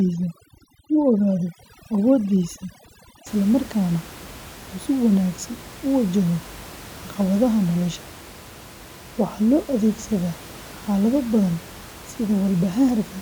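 Right from the start up to about 3.27 s you can hear overdone noise removal. The suppressor was pushed too hard, so bands near its noise estimate get gated out along with softer bits of speech, leaving the speech over a twinkly near-silence where room noise about 19 dB down should be.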